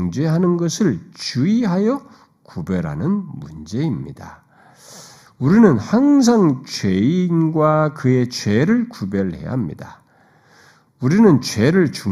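One channel arrives roughly a fifth of a millisecond late and is summed to mono, giving channel delay (comb filtering) throughout: fixed notches from about 3 kHz make the speech hollow and phasey.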